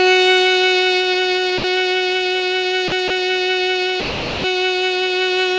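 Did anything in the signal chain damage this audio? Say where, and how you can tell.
Yes, in call processing. The music drops to steady comfort noise at 1.58–1.64 s, 2.88–2.92 s, 3.08–3.10 s and 4.00–4.44 s. A spectrogram shows harmonics giving way to flat, featureless noise. The likely cause is sound dropped by the voice detector, which took the music for background.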